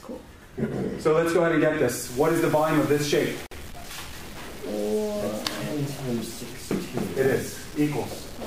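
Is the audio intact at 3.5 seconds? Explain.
No. A data bit, likely stuck at a fixed value from a broken line or converter, corrupts about half the samples from 2.04 s to the end, so the sound carries grainy noise or buzzy distortion, depending on the bit, and quiet stretches fill with noise. Separately encoded pieces were also joined without trimming the encoder's start delay and final-frame padding, producing a gap at the join from 3.46 to 3.51 s, about 51 ms long with smeared edges that shorten the silent part, before the sound resumes where it left off.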